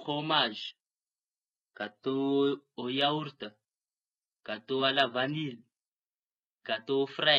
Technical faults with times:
0.00-5.89 adaptive stream starting at a low bitrate

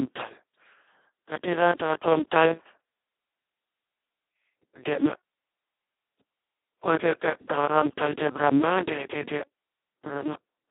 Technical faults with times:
0.00-10.70 Speex codec

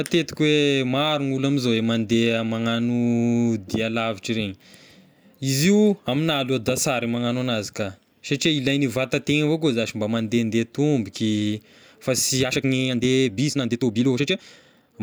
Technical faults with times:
12.41-15.03 time-stretched section

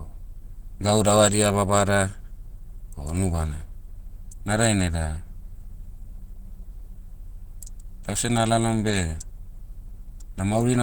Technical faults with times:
0.00-10.83 Opus compression

